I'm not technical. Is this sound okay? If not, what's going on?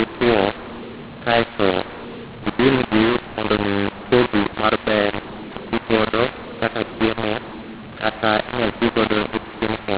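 No. From start to finish the speech sounds harsh and gritty, and the gaps between phrases fill with a hiss instead of going quiet. This is a mu-law and A-law mix-up. Telephone audio was packed with one version of the standard telephone code and unpacked with the other, so loudness levels get scrambled. Unlike ordinary overload distortion, which only roughens the loud moments, this also turns near-silence into noise.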